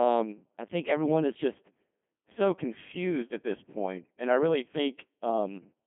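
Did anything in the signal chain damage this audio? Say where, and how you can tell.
Yes. A Codec 2 vocoder runs through the whole speech clip. The voice is robotic and buzzy, limited to a 200 Hz to 3.4 kHz telephone band, with nothing above 3.8 kHz. That damage level fits a low rate near 2.4 kbit/s. At this codec stage the original waveform is discarded. Only pitch, voicing, energy and a coarse spectral envelope are sent, and the decoder rebuilds the voice from sine waves, so the texture comes out synthetic.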